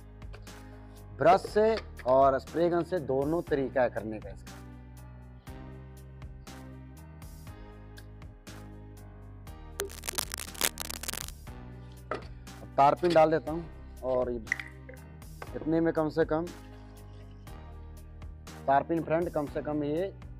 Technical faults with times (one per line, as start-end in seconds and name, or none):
9.78-11.31 cable scratch noise